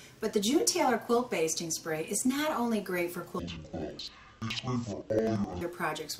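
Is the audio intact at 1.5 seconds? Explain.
Yes, at 1.5 seconds the audio is intact, with no dropout, click, distortion or other fault to be heard at that moment.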